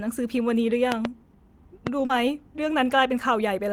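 Speech clip with two loud pops and one short concealed packet loss. Between 0.92 and 1.07 s, two pops arrive in quick succession, about 20 dB above the speech. A single pop at 1.87 to 1.89 s sits about 15 dB up. The speech carries on beneath both, and the sharp transients point to a likely voltage step from a connector, switch or static discharge. At 2.05 to 2.11 s, 40 ms of audio never arrived in time and was filled by extending the preceding sound before blending back into the real signal, leaving a brief smear.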